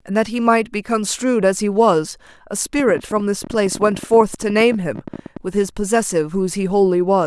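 A train of clicks runs from 2.80 to 5.38 s: around forty near-identical pulses at an average of 16.4 per second, spaced unevenly rather than on a steady beat. Each click peaks at roughly the level of the speech, so the ticking sits on top of the talker and carries through the gaps between syllables. The likely cause is interference from nearby equipment or a faulty connection or power supply injecting repeated short impulses into the signal path.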